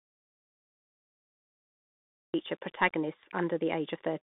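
From the very first moment the clip is dead silent, and that lasts until 2.34 s. It's an audio dropout to silence: no room tone, no hiss, just silence, which means the input was lost and the recorder kept writing nothing. Most likely the headset link dropped or the device disconnected before recording began. Whatever speech happened in that stretch is simply gone, and the sound comes back in mid-flow rather than easing in.

Once the speech arrives, it's clearly been through a Bluetooth CVSD headset codec, and the damage is plainly audible. The band is squeezed to roughly 150 Hz to 3.6 kHz, with nothing at all above 3.8 kHz, so it sounds thin and telephone-like. CVSD tracks the waveform one bit at a time with an adapting step, and the result here fits a 64 kbps stream. You get that grainy hiss under the speech, s sounds turn scratchy, and loud, bright moments distort where the step can't keep up.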